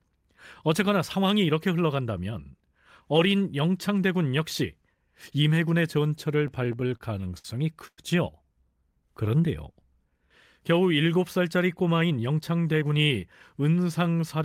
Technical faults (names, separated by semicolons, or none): repeated stalls (stutter); call audio freeze; jitter buffer slow-down; jitter buffer speed-up